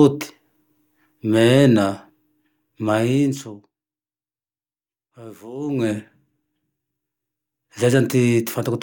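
A gain control in this speech is being updated in coarse steps with no smoothing between them, causing zipper noise. From 2.92 to 3.88 s the level drops by roughly 20 dB in about fifty jumps a second, and from 5.58 to 5.98 s it climbs back by about 20 dB in 1 dB steps at the same rate. Each jump leaves a tiny click, so both moves carry a buzzy ticking that lasts only while the level is changing.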